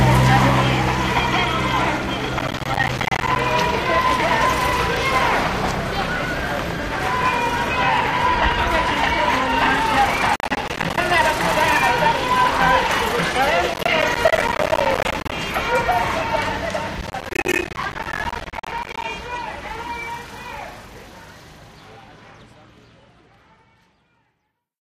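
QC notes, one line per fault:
2.39–3.36 s, 10.36–11.03 s, 13.74–15.34 s, 17.01–19.04 s: processor overload crackle. Buffer deadlines are missed again and again, each miss leaving a hard-edged silent gap of around 10 ms. Dozens of these per burst, most in the longest (17.01–19.04 s), produce a gritty crackle over the sound that stops once the load clears.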